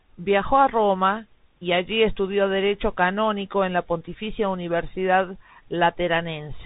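From start to finish the speech carries the signature of a Bluetooth CVSD headset codec, with nothing above 3.8 kHz. CVSD sends one bit per sample saying up or down and adapts its step size, which fits a 64 kbps link. The damage is plainly audible. S sounds turn scratchy and loud high passages distort where the step can't keep up. A granular hiss sits beneath. That grainy, slope-limited roughness sets it apart from a simple band limit.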